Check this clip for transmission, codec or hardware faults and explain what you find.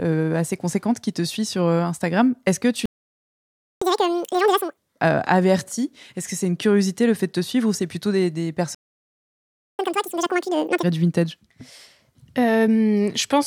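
Two related faults are present, each occurring twice: playback stalls, each followed by catch-up at higher speed.

Playback stall: The speech cuts out in mid-flow and the output goes completely silent, first from 2.86 to 3.82 s (about 0.96 s) right after "que tu", then from 8.75 to 9.79 s (about 1.04 s) after "ou c'est plutôt des". The likely cause is the player running short of incoming data, or its audio thread being blocked, so nothing reached the output until it recovered.

Catch-up at higher speed: As soon as each stall ends, the speech resumes audibly rushed and chipmunk-like, at double speed with pitch raised by roughly ten semitones. This runs from 3.82 to 4.77 s, settling back to normal just before "euh averti", and again from 9.79 to 10.83 s. The player is resampling its accumulated backlog to recover the time lost in the gap, then returning to normal rate once it has caught up.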